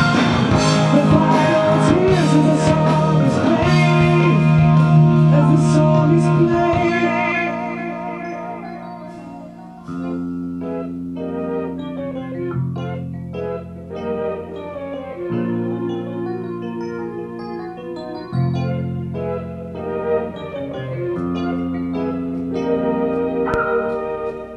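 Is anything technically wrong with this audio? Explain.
Yes, there's one loud pop near the end, from 23.54 to 23.57 s. It's a single sharp hit sitting around 10 dB above the surrounding audio, with the sound carrying on underneath. It's likely a voltage step from a plug, switch, static or driver glitch that the downstream circuitry shaped into a short pulse.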